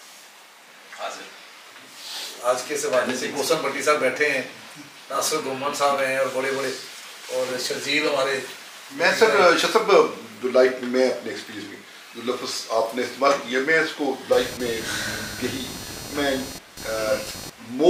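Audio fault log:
14.32–17.89 s: computer activity noise. A buzz pulsing about 300 times a second, roughly 15 dB below the sound, from computer load shifting the shared ground. Regular vertical striations on the spectrogram.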